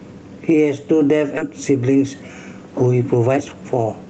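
Throughout the speech, gain pumping swings the level by about 10 dB, pulling it down under each loud syllable. The likely cause is gain set far too high with a fast limiter clamping it. Loud and soft parts end up closer in level, and the sound is squashed.

At 1.37 to 1.39 s a skip ahead drops roughly 0.7 s of speech with no fill. The two sides are joined almost directly, so playback jumps forward abruptly. It is a clean cut rather than a dropout with silence or a concealment smear.

From 1.47 to 2.30 s a jitter buffer speed-up runs at 113%, trimming about a tenth of a second. From 3.08 to 4.08 s a stronger one runs at 126%, trimming about 0.3 s. Short pitch-period pieces are removed repeatedly, so the speech sounds hurried while the pitch stays the same, unlike a resampling error, which would raise the pitch. The band is limited to about 8 kHz, which fits an Opus call path.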